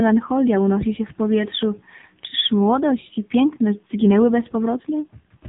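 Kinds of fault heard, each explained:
AMR narrowband mobile codec: The speech is cut off near 3.8 kHz and sounds heavily buzzy and synthetic, consistent with a low AMR-NB mode around 6.7 kbps. That coded, artificial timbre sets it apart from a simple telephone-band filter, which only dulls the sound.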